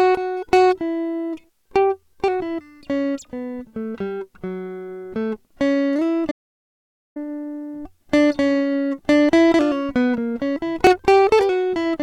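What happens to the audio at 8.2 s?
Nothing goes wrong at 8.2 s: the music plays through that moment intact, with no dropout, click or other audible fault.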